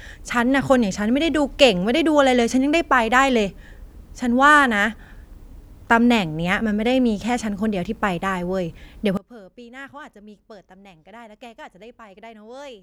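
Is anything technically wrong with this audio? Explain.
Yes. From 9.17 s to the end at 12.82 s, one channel is likely inverted in polarity, so when the two are summed to mono, everything common to both cancels. The centred speech falls by about 23 dB, leaving only a faint difference signal.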